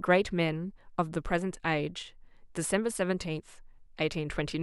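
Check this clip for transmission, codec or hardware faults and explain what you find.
No faults detected.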